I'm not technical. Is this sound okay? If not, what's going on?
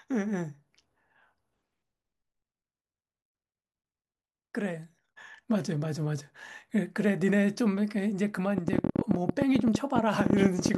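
No. From 8.58 to 10.76 s there's a train of clicks: about thirty sharp ticks, nearly fifteen a second at an uneven pace. Unlike a single pop, it keeps going; likely interference or a faulty connection.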